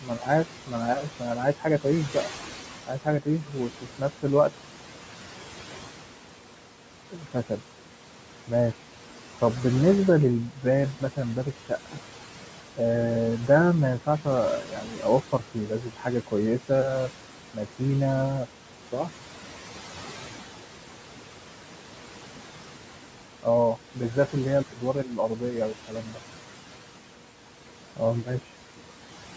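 Throughout, noise suppressor artifacts: the background is pulled down about 12 dB between phrases and rises under speech.

Speech cut by the noise suppressor occurs at 0.01–2.29, 2.87–4.51, 7.12–7.59, 10.53–11.97, 14.06–17.81, 23.43–24.82 and 25.39–26.19 s. In these spans, soft consonants and word endings are mistaken for noise and dropped by about 9 to 12 dB, so they sound swallowed. They appear as sudden dips in the waveform envelope and faded high-frequency consonant energy. The longest, around a second in total, falls between 14 and 18 s.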